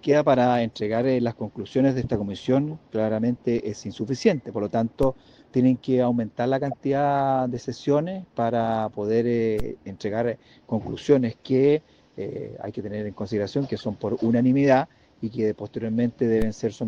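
At 5.03 s a DC step shifts the waveform's zero line abruptly, then a 5 Hz high-pass lets the offset decay. It is heard as a low thump, and on a waveform the trace visibly shifts off centre before settling back. From 6.71 to 6.74 s a corrupt frame was decoded anyway, spanning a few frames. Misread data sprays energy at wrong frequencies, causing a chirp-like blip peaking around -20 dBFS, seen on a spectrogram as a short, bright vertical smear. The same DC step thump recurs at 9.60 s, a second corrupt-frame burst follows from 13.79 to 13.81 s somewhat quieter than the first, and a final DC step lands at 16.42 s.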